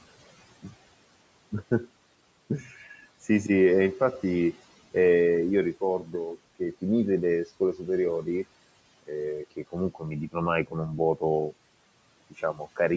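Speech cut by the noise suppressor occurs at 2.61–3.27 s, 5.74–6.83 s, 7.46–7.88 s, 9.03–11.53 s and 12.3–12.79 s. The suppressor takes parts of the speech for background noise and turns them down with it, by about 9 to 12 dB in the first three spans and about 16 to 20 dB in the last two. Only brief pieces within each span are hit, so syllables and word endings sound swallowed or faint.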